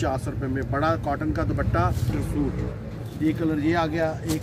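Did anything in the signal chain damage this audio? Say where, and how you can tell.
Yes. Skip ahead at 2.09 to 2.11 s: in the network and jitter buffer stage, roughly 0.7 s of audio was discarded while later audio was already queued, so playback jumps straight across the missing stretch with no gap or fill. The two sides join almost directly, with a sudden discontinuity in the sound.

Jitter buffer speed-up from 3.05 to 4.35 s: the receiver's buffer was holding more audio than its target, so it repeatedly cut out short pitch-period pieces, roughly 70 ms in total. The audio runs at 105% speed with unchanged pitch and sounds slightly hurried.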